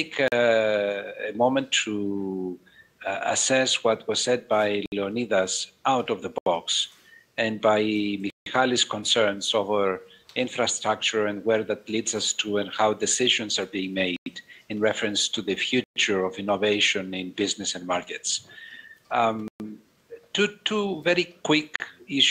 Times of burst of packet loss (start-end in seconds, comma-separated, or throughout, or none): none